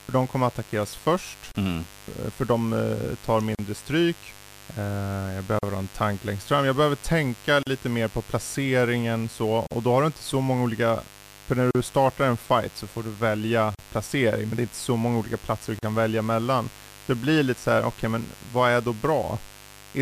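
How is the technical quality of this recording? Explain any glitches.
The technical quality is compromised by two faults: a continuous buzz and regular dropouts in the speech.

Mains buzz runs throughout: switching spikes twice in every 50 Hz mains cycle add a raspy tone about 25 dB below the speech, visible as evenly spaced horizontal harmonic lines on a spectrogram.

Gaps at a join of encoded pieces occur every 2 s, at 1.52, 3.55, 5.59, 7.63, 9.67, 11.71, 13.75 and 15.79 s. The first lasts 32 ms and the rest 40 ms. Each gap comes from encoder delay and end padding left in at a join, and shows as a flat, slightly smeared notch in the waveform before the sound resumes.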